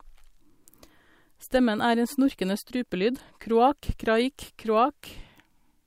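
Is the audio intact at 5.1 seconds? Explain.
No. From 3.51 s to 5.51 s the speech has periodic USB or driver dropouts: every 0.5 s a tiny fraction of a millisecond of audio is lost and replaced by silence, likely because a background task stalls the driver. The gaps sound as regular ticks while there is speech.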